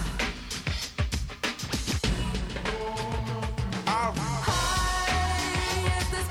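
Grainy distortion runs through the whole sound and rises and falls with it, worst on quiet passages, where the quietest parts break up or cut to silence. Low bit depth without dither is the likely cause, with error roughly 40 dB below the signal, which fits rounding to 9 bits. Dithered reduction would instead leave a steady, signal-independent hiss.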